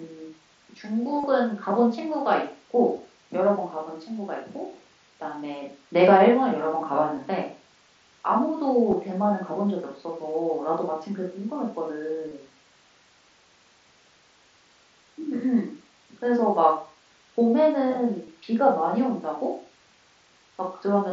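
Concealed Bluetooth headset packet loss breaks into this speech at 1.20–1.24, 2.97, 7.16, 8.91, 12.29–12.31 and 18.25–18.28 s. In each of these short gaps, between 15 and 30 ms of lost audio was patched by repeating the best-matching stretch of the preceding waveform. The result is a buzzy fill and a slight warble as the real signal resumes, heard through the wideband mSBC headset codec's 8 kHz ceiling.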